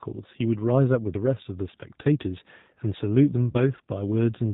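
It's a speech clip with the G.729 codec's damage plainly audible the whole way: band-limited below 4 kHz, rough and a bit synthetic, which fits an 8 kbit/s G.729 stream. Then there's VoIP packet loss concealed by the speech codec from 3.51 to 3.58 s. About 30 ms went missing, and the decoder stretched the last pitch into a fading sound before the sound recovered.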